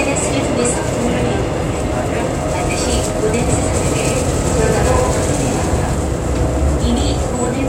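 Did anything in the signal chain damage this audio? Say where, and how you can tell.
Yes. From 3.49 to 5.95 s every event is trailed by a dry, full-band echo about a tenth of a second behind and about 5 dB quieter, switching on and off abruptly: a doubled audio track, likely from a second out-of-step capture path in the driver or buffer stage.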